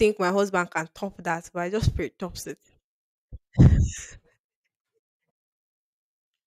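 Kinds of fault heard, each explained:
No faults heard in the speech; nothing to report.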